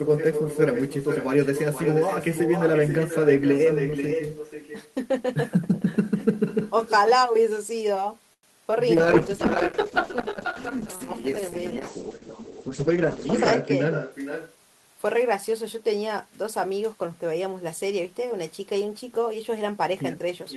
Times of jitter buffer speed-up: 12.62-13.28, 13.73-14.57

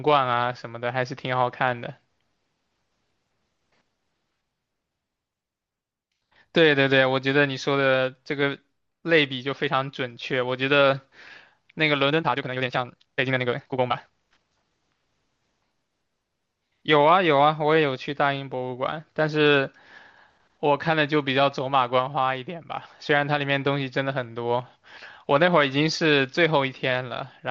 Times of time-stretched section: 12.08-14.72

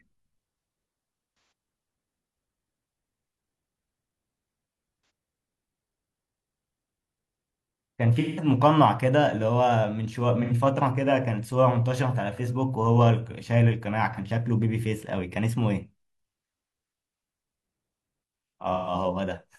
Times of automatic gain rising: none

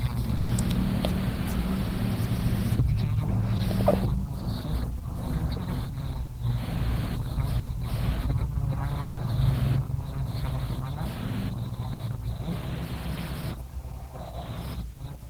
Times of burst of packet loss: 0.37-0.51, 7.59-7.69, 11.93-12.01

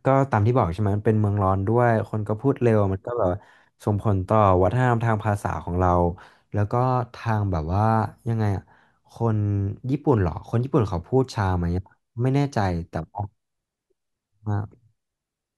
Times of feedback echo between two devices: none

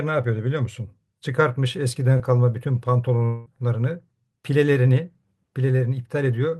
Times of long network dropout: 3.26-3.48

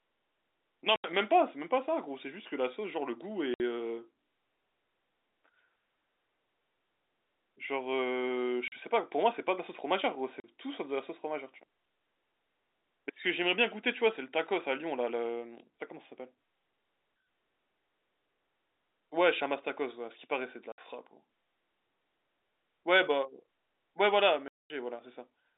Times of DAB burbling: none

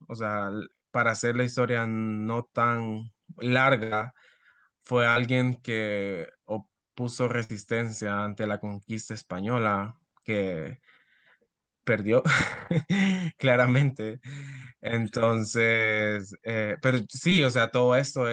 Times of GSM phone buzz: none

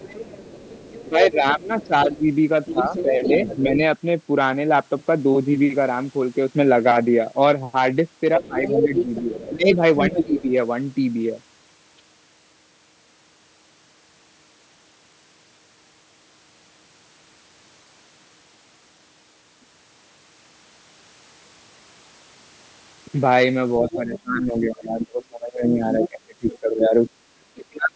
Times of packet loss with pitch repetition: none

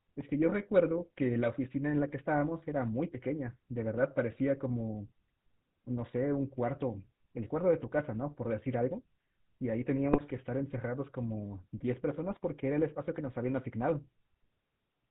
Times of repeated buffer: none

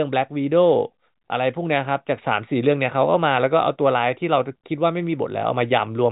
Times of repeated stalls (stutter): none

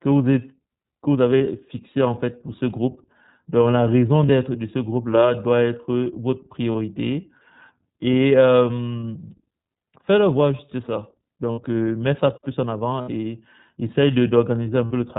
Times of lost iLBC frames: 1.38-1.41, 4.26-4.29, 6.72-6.75, 9.01, 11.52-11.62, 13.01-13.09, 14.85-14.91

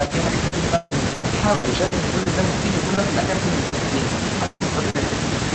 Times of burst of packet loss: 4.46-4.62

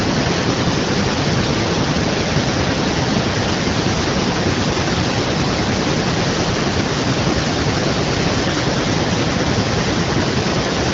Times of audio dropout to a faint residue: none

